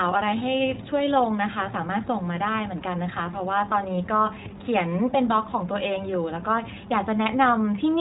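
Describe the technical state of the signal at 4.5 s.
A phantom power thump runs from 4.46 to 4.54 s: a supply switching on the live input pushes a step through the coupling capacitors, giving a deep thump that dies away in about 19 ms. Underneath, iLBC codec damage persists through this moment, with each 20 ms frame coded independently, nothing above 3.8 kHz, and a rough, synthetic edge that fits roughly 15.2 kbps.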